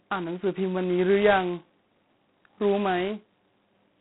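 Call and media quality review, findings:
G.726 ADPCM damage throughout the speech. Harsh, rasping hiss that rises and falls with speech level. Band limited to about 150 Hz to 3.4 kHz, nothing above 3.9 kHz. Coarse difference quantisation, consistent with the 16 kbit/s G.726 rate.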